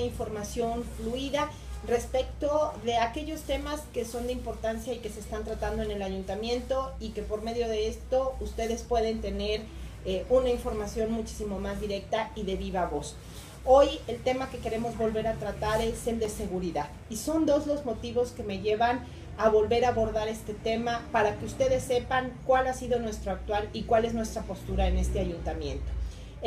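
At 16.02 s a short run of CD scratch ticks starts, three of them by 16.48 s, spaced roughly a quarter-second apart. That regular spacing is the tell: a scratch or blemish on the disc wipes out more data than the error correction can rebuild, and it comes round once per revolution. The player patches the damaged samples by interpolating or muting them, so you get tiny clicks, each around a millisecond at most, rather than a longer gap.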